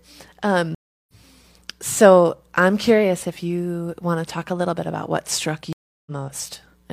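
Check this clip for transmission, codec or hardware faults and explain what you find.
Two stream reconnects break this speech clip, at 0.75 to 1.13 s and 5.73 to 6.11 s. Each time the connection dropped and the player restarted a fresh decoder mid-stream. About 0.34 s of silence follows, then the speech resumes roughly a fifth of a second further on, skipping material, with the first frame fading in.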